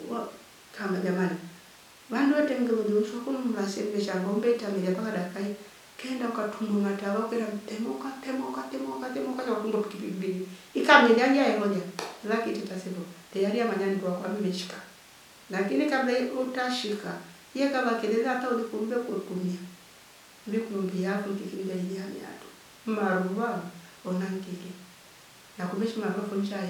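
A speech recording with nothing technically wrong with it.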